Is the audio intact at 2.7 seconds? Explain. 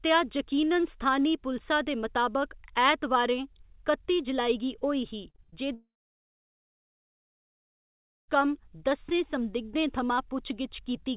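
Yes, the speech at 2.7 seconds is intact, carried through a call path whose narrowband coding leaves nothing above about 4 kHz, which fits G.711 mu-law telephone coding.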